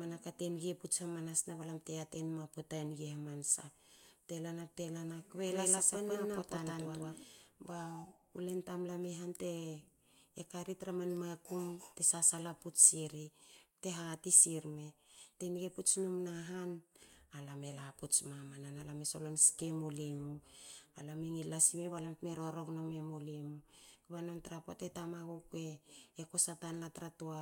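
Right after "lana bte lana kbe", from 5.47 s to 7.23 s, the speech plays as a doubled audio track: a second full-band copy about as loud as the original trails it by roughly 150 ms, giving a stuttering, slapback double. It is likely a second capture through a slower path or two misaligned copies in an edit. Unlike an echo or reverb, the copy repeats only once, carries no decay or room colour, and switches on and off abruptly at both ends.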